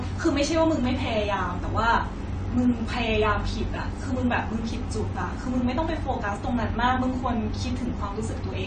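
From start to finish, computer activity noise runs under the speech: a faint buzzing, chirping texture pulsing around 70 times a second, sitting roughly 35 dB below the voice. It rises and falls with the machine's processing load rather than with the talking, because those load swings shift the ground the audio circuit shares. On a spectrogram it shows as a comb of thin horizontal lines spaced about 70 Hz apart, persisting through pauses where the waveform should be flat.

Also present throughout is plainly audible damage consistent with AAC compression: nothing reaches above 9 kHz, so sibilants lose their edge and the speech sounds dull and smeared, with a watery warble on sustained vowels. The likely cause is AAC-LC coding at a low rate, which fits about 32 kbps, where the encoder drops the cut-off and discards quiet spectral detail. A spectrogram shows a hard ceiling at 9 kHz and patchy, blocky holes in the upper bands between harmonics.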